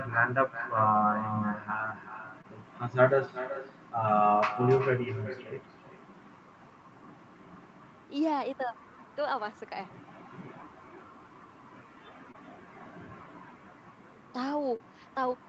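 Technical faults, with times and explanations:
Throughout: echo with no canceller. Every phrase returns roughly 0.4 s later, about 11 dB quieter and thinner. The far end's loudspeaker fed its microphone and nothing removed it. Unlike room reverberation, the copy is a distinct delayed repeat, not a smooth decaying tail.
2.41–2.46 s, 12.32–12.36 s and 14.76–14.82 s: short concealed packet loss. Each gap is heard as a brief smear or wobble rather than silence. The first two fit one lost 20 ms frame, the last two frames. The decoder extended the preceding sound and blended back, so there is no hard click or true dropout.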